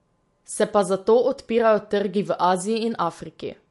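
Throughout the clip, the speech most likely passed through MP3 compression at a starved bitrate, and the damage is plainly audible. Short of bits, the encoder has cut off the treble: nothing is left above 11.3 kHz, a ceiling that fits a rate around 48 kbps. It has also dropped weaker frequency lines that then flicker in and out between frames, giving the speech a watery, swirling texture, with chirpy s sounds and smeared onsets.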